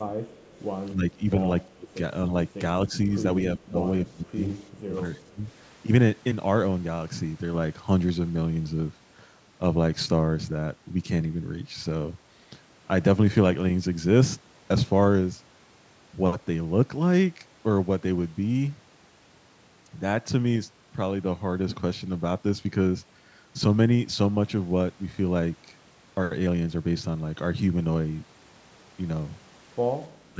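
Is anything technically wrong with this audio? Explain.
Yes. This speech clip has two faults.

Speech suppressed in double talk occurs seven times: 0.07 to 0.16 s, 0.9 to 1.25 s, 1.75 to 1.9 s, 2.89 to 2.96 s, 3.57 to 4.39 s, 4.8 to 5.45 s, and 30.33 to 30.4 s. The voice dips and partly cuts out. The deepest drops reach roughly 20 to 25 dB, and the mildest is only a few dB. The likely cause is an echo canceller that could not tell the near talker from loudspeaker echo, so it turned both down.

An echo leak is heard from 0.29 to 0.59 s. It is a faint, delayed copy of the voice, about 35 dB below the speech, arriving 278 ms late. It likely comes from a far end using a loudspeaker, where the echo canceller missed part of what its microphone picked up and sent it back. The scrap is brief. The band stops at 8 kHz, which suits the call's microphone processing.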